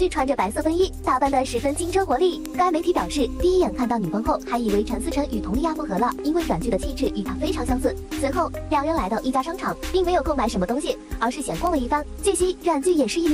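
Five sharp, isolated ticks land at 2.46, 6.12, 7.06, 11.67 and 12.89 s, peaking near about -8 dBFS (the first, second and fourth) and about -14 dBFS (7.06 and 12.89 s). Each is a bit error spike: a flipped bit throws one or two samples far off and back, producing a broadband click unrelated to the surrounding sound.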